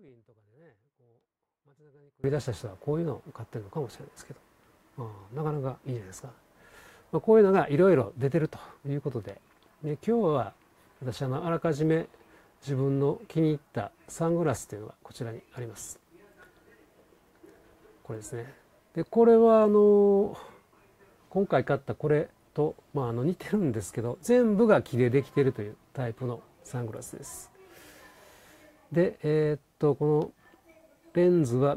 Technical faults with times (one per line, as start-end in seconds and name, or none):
0.00-2.24 audio dropout to a faint residue